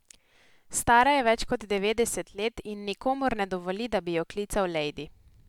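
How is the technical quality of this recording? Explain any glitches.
Nothing to worry about here: the recording holds together nicely the whole way, with no glitches to point out.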